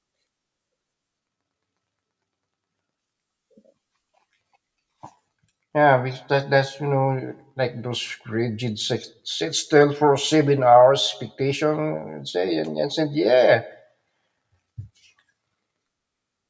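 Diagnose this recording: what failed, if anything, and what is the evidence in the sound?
Nothing failed here as far as I can hear; there's nothing in the sound that points to trouble anywhere between capture and playback.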